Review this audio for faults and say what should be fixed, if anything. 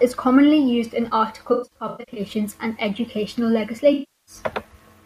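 AAC frame loss with concealment occurs twice in this speech: from 1.52 to 2.19 s, where about 405 ms of audio is missing in scattered runs (the longest around a tenth of a second), and from 3.93 to 4.35 s, with about 341 ms lost. The decoder patches each gap by replaying the last good spectrum with randomised phase, so the first stretch sounds smeared and phasey. A spectrogram shows blurred, stationary smears in place of the normal detail, and a waveform shows flattened noisy sections. The fix is better error protection or retransmission on the transport.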